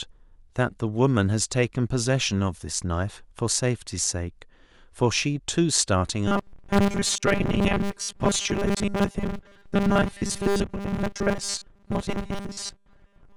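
From 6.28 s to the end at 13.4 s, the speech becomes robotic sound from repeated short buffers: a rigid, metallic buzz fixed at 200 Hz that still loosely follows the speech. New audio is likely arriving too seldom, so a segment of about 5 ms is looped in its place, with roughly seventy percent of the signal being repeats. A spectrogram shows evenly spaced horizontal lines at 200 Hz intervals, and the waveform shows identical 5 ms cycles repeating.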